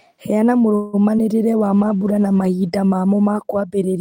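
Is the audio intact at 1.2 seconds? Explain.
No, short concealed packet loss hits from 1.17 to 1.24 s. About 20 ms of the call arrived too late to decode, and the receiver bridged the gap by extending the preceding sound before blending back in, leaving a brief smear or wobble.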